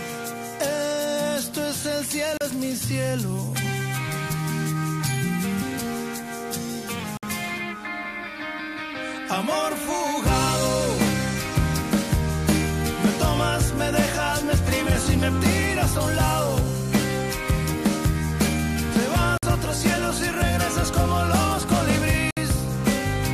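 Packets held up by radio interference likely starved the headphones' buffer in a series of Bluetooth stalls at 2.37, 7.17, 19.38 and 22.31 s. Each time the sound drops to silence for 34, 56, 52 and 61 ms respectively, then resumes.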